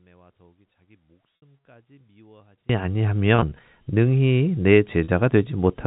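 From 0 to 2.69 s the speech drops by about 36 dB and turns faint, likely because one channel was inverted so the shared centre cancels when summed to mono. The waveform shrinks to a sliver.

Packet loss with pitch repetition occurs at 1.37 s, 3.36 to 3.52 s, and 5.04 s. The receiver bridges each gap by looping the last pitch period, which produces a brief buzzy held tone, or on the longer first gap a fade into silence. The first gap, 60 ms long, fits three 20 ms packets. The second is scattered over 160 ms. The third lasts 40 ms. On a spectrogram each gap shows as flat, repeated harmonic stripes, and the waveform shows identical cycles that taper off. The narrow G.711 telephone band is audible throughout.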